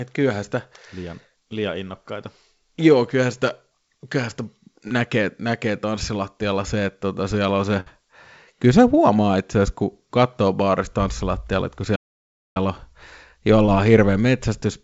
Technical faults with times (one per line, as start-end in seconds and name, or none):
4.88-4.92 short concealed packet loss
7.80-7.88 burst of packet loss
11.95-12.57 playback stall
13.66-13.70 short concealed packet loss